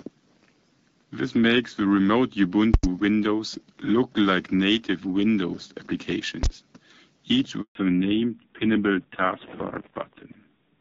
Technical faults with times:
2.74-2.83 invalid numbers at full scale
6.43-6.46 invalid numbers at full scale
7.61-7.75 handover gap
7.75-10.81 fallback to narrowband

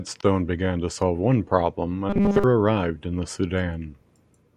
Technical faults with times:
2.10-2.44 robotic sound from repeated short buffers

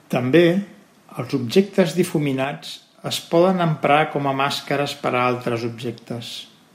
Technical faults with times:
2.44-3.06 sudden gain jump

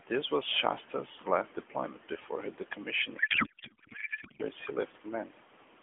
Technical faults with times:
3.18-4.44 codec payload misread

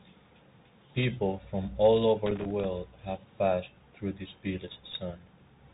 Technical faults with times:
0.00-5.74 Bluetooth CVSD headset codec
2.26-2.65 loose connector crackle
4.91-4.93 Bluetooth headset packet repeated

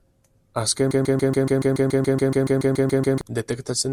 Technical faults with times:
0.91-3.21 broken-record loop

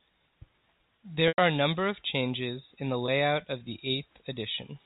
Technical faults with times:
1.28-1.38 packet loss with pitch repetition
3.06-3.08 packet loss with pitch repetition

